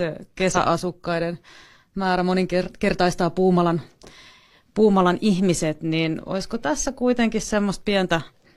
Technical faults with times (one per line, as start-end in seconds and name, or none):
0.51-0.56 damaged data in a compressed stream